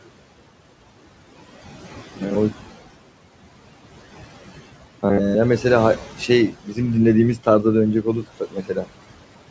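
Throughout the speech, the room noise (about 14 dB below the voice) pumps, dropping away between words and swelling back underneath them. These are noise suppressor artifacts: frame by frame, the suppressor pulls the noise-dominated bands down by about 17 dB.

From 1.70 to 2.35 s, and again from 4.61 to 5.35 s, the voice turns into a rigid metallic buzz at 100 Hz that only loosely tracks the speech. This is robotic sound from repeated short buffers. Audio likely arrived too late, so the playback side looped the last 10 ms of sound over and over, covering most of each stretch while the real audio was skipped.

At 6.52 to 6.78 s, roughly 150 ms of speech sinks by up to about 13 dB and sounds swallowed. From 8.22 to 8.89 s, a larger portion of around 300 ms falls by as much as about 18 dB. Both are speech cut by the noise suppressor: it mistook these quieter speech sounds for background and turned them down along with the noise.

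The call path passes nothing above 8 kHz, which fits a wideband codec such as G.722.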